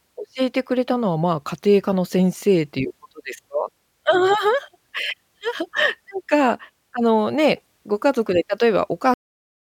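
At 9.14 s the speech stops abruptly in the middle of a sound, a cut-off end. The final stretch of audio, about 0.56 s, was never written out or played, so the sound has no natural decay and goes straight to digital silence. On a waveform the trace ends mid-sound and becomes a flat line. A spectrogram shows energy across the band up to a sharp vertical edge, then nothing.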